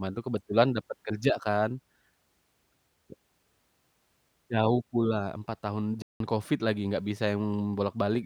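A speech clip with a playback stall from 6.02 to 6.20 s: the sound halts mid-flow for about 180 ms, likely because the player ran short of data or its thread was blocked. That silence lasts a noticeable time.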